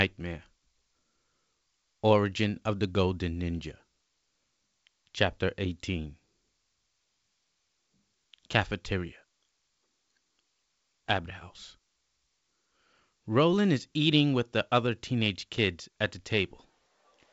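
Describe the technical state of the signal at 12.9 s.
At 12.9 s the speech is intact, carried cleanly through G.722 wideband telephone coding at 64 kbit/s with the band ending near 7.7 kHz.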